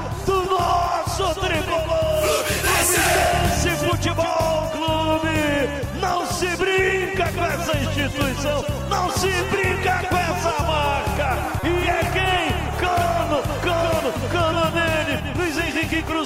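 At 11.60 to 11.64 s there's a corrupt frame decoded: a single damaged frame was played anyway, throwing energy to the wrong frequencies as a brief blip or burst.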